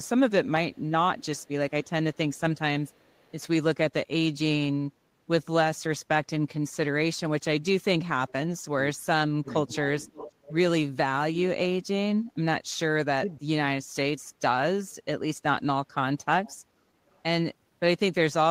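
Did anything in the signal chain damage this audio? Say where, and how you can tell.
Yes. A faint-to-clear delayed copy of the speech, about half a second late, appears at 0.73–3.43, 8.3, 9.49–10.59 and 17.1 s. This is echo leak, likely from a loudspeaker side's echo canceller in call processing.

The speech dips by a moderate amount at 8.88–10.16 s and drops sharply at 13.2–13.87 s. This is speech suppressed in double talk, likely the echo canceller ducking its own talker along with the loudspeaker echo during overlap.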